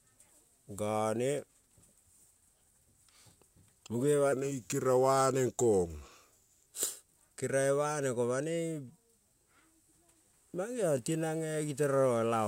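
Speech, with a section at the wrong speed from 4.32 to 6.67 s: playback drops to 0.879 times the original rate, so the voice slows and sinks by roughly two semitones, then snaps back. The likely cause is that section being resampled or played against the wrong clock.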